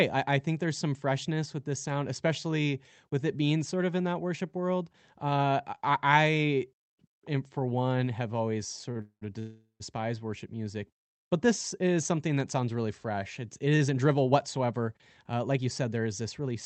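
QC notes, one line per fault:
8.91 to 9.01 s, short stall from a late packet: the speech hangs on one sound for about 42 ms and then about 18 ms, a brief held buzz with nothing lost. A packet arrived late, the jitter buffer emptied, and the receiver stretched the last audio until it came.
9.01 to 9.23 s and 9.39 to 9.82 s, call audio freeze: the sound turns into a fading buzz, then near silence, for about 0.2 s and then 0.41 s, and picks up exactly where it stopped. The likely cause is packets held up in transit, draining the jitter buffer.
13.59 to 16.55 s, jitter buffer speed-up: speech runs about 8% fast at unchanged pitch, sounding slightly hurried. With too much audio queued after the delays, the receiver trimmed tiny pitch-period slices repeatedly, cutting roughly 0.2 s to bring the delay back down.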